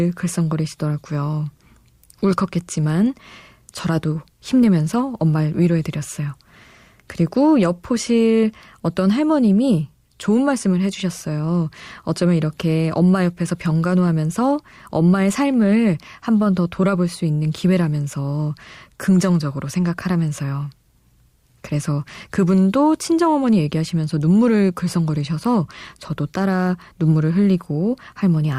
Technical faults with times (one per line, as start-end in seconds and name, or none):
none